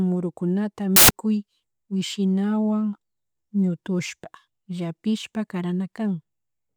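Speech clip with a burst of samples built from the wrong bytes between 0.96 and 1.11 s. Misassembled bytes promote the low-order bits, producing loud, harsh broadband noise for that stretch.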